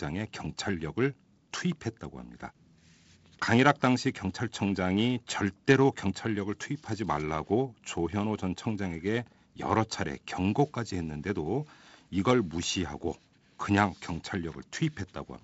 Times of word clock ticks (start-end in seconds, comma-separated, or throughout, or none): 0.24-14.95